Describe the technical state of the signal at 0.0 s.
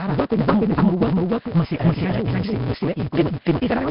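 At 0.0 s a doubled audio track is already present: a full-band copy about as loud as the original trails by roughly half a second, visible as repeated waveform shapes without decay.

A block size mismatch (truncated) runs from the start too. Block ends are discarded, so the speech plays 1.88 times fast at near-normal pitch, with a 172 Hz buzz that fits 256-sample reads and shows as regular vertical striations.

The speech also has a rough, hissy, underwater smear, most likely from Nellymoser compression. It is heavily damaged, and the spectrogram shows nothing above 5.3 kHz, with noise-filled patches where weak bands are.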